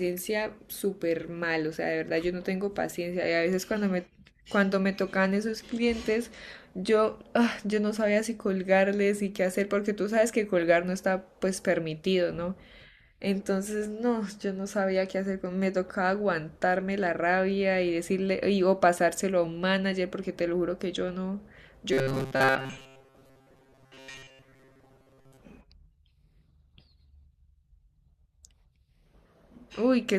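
From 21.93 to 25.40 s the speech turns into a rigid, metallic buzz that still loosely tracks the syllables: robotic sound from repeated short buffers. The likely cause is audio arriving too seldom, so the software loops roughly the last 7.5 ms instead, with most of the real signal skipped. That loop imposes a fixed 133 Hz tone. Unlike a plain dropout, there is no silence, and unlike a pitch shift, the buzz holds steady whatever the voice does.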